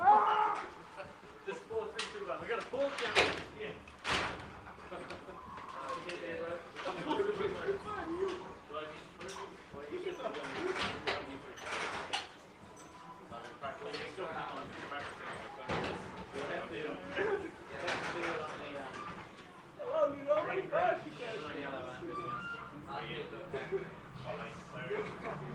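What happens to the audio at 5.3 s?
Nothing goes wrong at 5.3 s; the audio plays through that moment intact, with no dropout, click, glitch or other fault.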